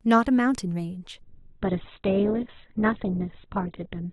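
At 1.22 s the speech abruptly switches to an adaptive stream at a lower bitrate and stays there to the end. The connection slowed, so the player swapped to a leaner version without a gap: nothing above 4.2 kHz survives, and coding artefacts thicken, consistent with a drop from about 64 to 8 kbit/s.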